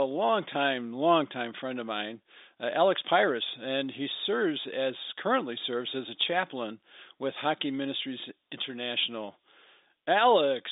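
No faults are audible in the speech, which sits in a narrow telephone band with nothing above about 3.8 kHz.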